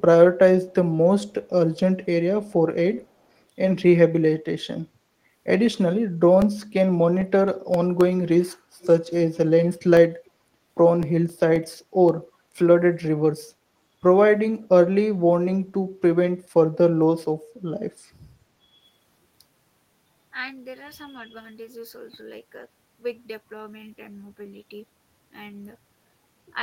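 From 5.89 to 8.27 s, CD scratch ticks appear. Ten sharp clicks arrive about four per second, the longest near 4 ms. A blemish defeats error correction once per disc turn, so the player patches the samples.

From 8.81 to 8.97 s there is an echo leak. A faint copy of the speech returns 401 ms late, about 25 dB down. A speakerphone's echo canceller likely let some of its loudspeaker sound pass back.

From 9.71 to 12.09 s the CD scratch ticks return. Again ten clicks sit about four per second, now no longer than 2 ms. A rotating flaw is breaking through each revolution.

At 18.66 to 18.81 s the speech is suppressed in double talk. The level dips, at most by around 10 dB, for roughly a tenth of a second. The likely cause is an echo canceller ducking the talker while both sides spoke.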